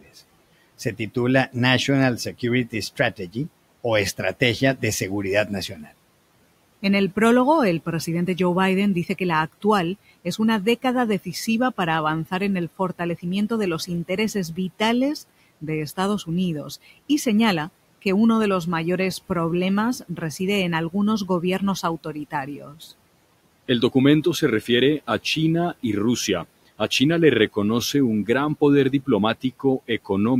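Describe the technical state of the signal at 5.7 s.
At 5.7 s the noise suppressor cuts into the speech from 5.68 to 5.91 s, treating quiet speech as noise and pulling it down by up to about 11 dB. That part sounds swallowed and faint. On a spectrogram, energy thins abruptly there, and the waveform envelope dips.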